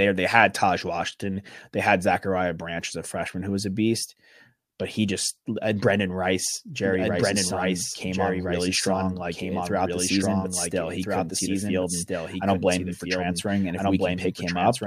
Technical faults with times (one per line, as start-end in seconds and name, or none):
6.83-14.87 doubled audio track